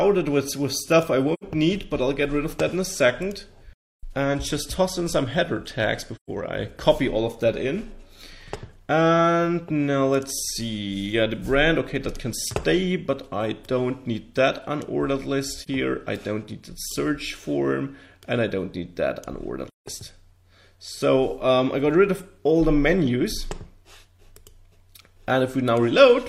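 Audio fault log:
1.33–1.44 s, 3.73–4.04 s, 6.16–6.30 s, 15.61–15.68 s, 19.68–19.86 s: AAC frame loss with muting. The sound drops out for between about 43 ms and 300 ms, each gap a whole multiple of roughly 43 ms, which fits 1024-sample frames at 24 kHz. The decoder zeroes each missing frame's spectrum, and the overlapping windows fade the edges. On a spectrogram, full-band blank columns with tapered sides; on the waveform, a smooth taper into a brief dip for the single lost frame, or flat silence for the longer runs, and back.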